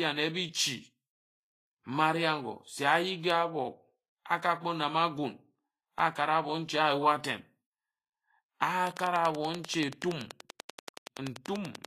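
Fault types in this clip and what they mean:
Vorbis compression: likely a low-bitrate Vorbis encode, which fits about 29 kbps, quantising the treble coarsely over a smooth spectral floor. The speech sounds plainly grainy and hissy throughout, with blurred attacks and nothing above about 14.2 kHz.
Block of digital silence: the output buffer was not filled in time, or a calculation gave invalid numbers, so a 4.4 ms run of zeros came at 5.99 s, just before "akara obo nji a". Being so short, it is heard as a tick or dip, not a gap.
Train of clicks: likely interference or a faulty connection or power supply injecting pulses of much the same shape, here at a regular 10.4 per second from 8.87 s to 11.86 s, around thirty in all, about 15 dB above the speech, heard as steady ticking.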